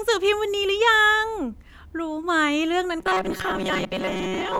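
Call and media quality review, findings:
Rigid metallic buzz at about 188 Hz over the speech from 3.00 s to the end, still loosely tracking the phrasing. Robotic sound from repeated short buffers, likely receive-side underrun: a roughly 5.3 ms chunk replayed, replacing most of the real audio.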